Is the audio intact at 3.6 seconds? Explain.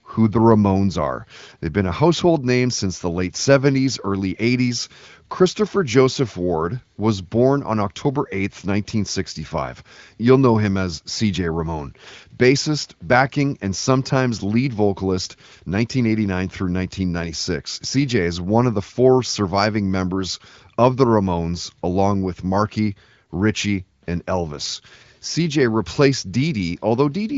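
Yes, the speech at 3.6 seconds is intact, with the AMR wideband (HD Voice) coding at about 18.25 kbit/s leaving it clear and showing no fault at that moment.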